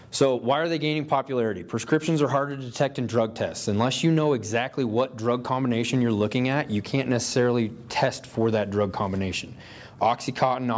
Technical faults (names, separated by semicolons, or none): none